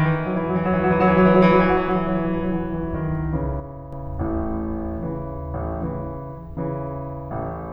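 From 3.6 to 3.93 s, one channel likely drops out, so the mono sum loses about 6 dB of shared music abruptly before recovering.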